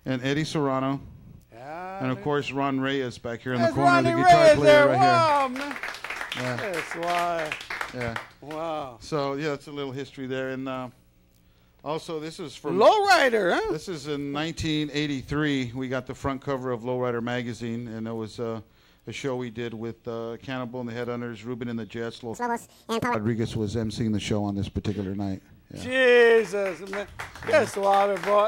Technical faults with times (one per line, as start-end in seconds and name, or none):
22.34-23.15 section at the wrong speed